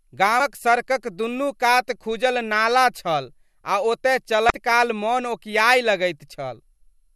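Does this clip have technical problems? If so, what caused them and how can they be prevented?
Yes. Two brief glitches, at 0.37 to 0.40 s and 4.47 to 4.50 s, come from damaged data in a compressed stream: corrupted bytes cause the decoder to misread frames and lose sync until it finds the next valid header. Checksummed transport and verified file transfers prevent this.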